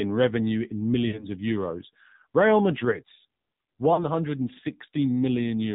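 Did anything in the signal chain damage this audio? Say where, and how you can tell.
Yes. The damage is in the codec stage: the speech went through the AMR narrowband mobile codec, and the thin, buzzy, synthetic quality throughout points to a low mode around 7.4 kbps. Nothing above 4 kHz survives, because the 8 kHz sampling throws it away.

The network stage added lost AMR speech frames. From 1.08 to 1.25 s, between "revenue in" and "of euros", the speech smears and sags, which fits about three failed 20 ms frames. Again from 3.94 to 4.06 s, roughly two frames go missing. Each time the decoder replayed its last pitch and filter settings at falling gain.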